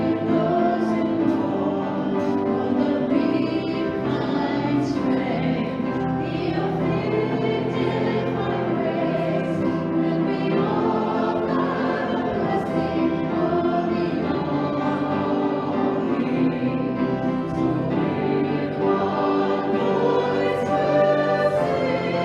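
No technical faults can be heard anywhere in the recording; the signal stays continuous and stable throughout.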